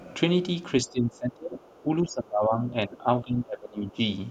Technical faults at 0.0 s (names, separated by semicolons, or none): none